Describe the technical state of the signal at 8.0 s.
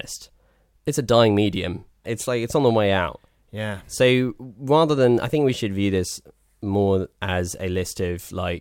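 At 8.0 s the speech carries sample clock jitter, running from 5.10 to 8.53 s. The converter clock wanders by around a microsecond and a half, so samples land early or late at random. The error tracks waveform slope, sitting roughly 40 dB below the signal as a hiss or roughness that rises on loud, high-frequency sounds and disappears in silence.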